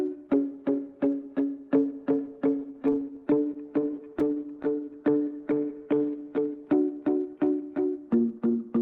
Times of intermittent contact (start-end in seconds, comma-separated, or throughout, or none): none